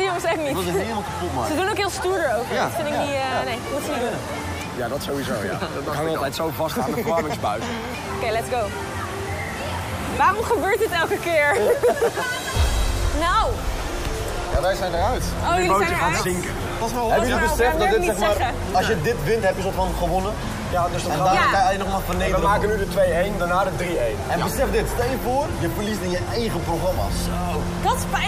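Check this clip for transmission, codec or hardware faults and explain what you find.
Nothing here stands out as a fault; it all comes through steady and intact, with no dropouts, glitches or damage to point to.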